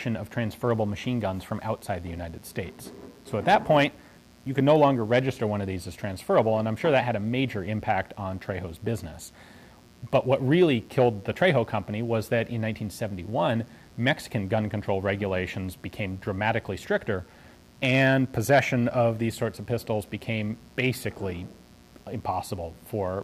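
Mains buzz runs through the whole clip, from the first moment to the last. Switching spikes from something like a dimmer, a rectifier or an unshielded cable are getting into the signal path twice per cycle of the 60 Hz supply, so the interference repeats 120 times a second and carries a dense stack of 60 Hz harmonics up into the kilohertz range. It sits well below the main sound as a constant, raspy, edgy buzz underneath everything.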